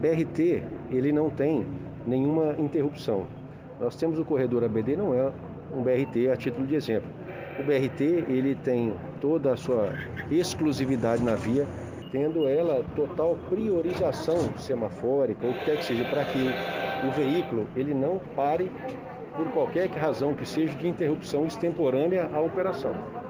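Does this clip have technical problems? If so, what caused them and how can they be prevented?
Yes: imaging from linear upsampling runs through the whole clip. Straight-line interpolation, which fits a raise from 16 kHz to 48 kHz, dulls the top of the original band and leaves a faint mirror image between 8 and 16 kHz, roughly 35 dB down, heard as a thin metallic shimmer on bright sounds. Using a proper windowed-sinc or polyphase resampler with a steep anti-imaging low-pass filter would prevent it.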